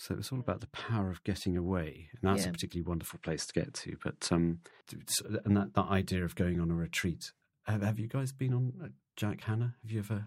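From 3.10 s to 4.71 s the speech loses everything above 11.4 kHz, shifts in level by roughly 5 dB, and carries a different low noise floor, with no gap at either transition. This points to the input likely switched to a poorer device.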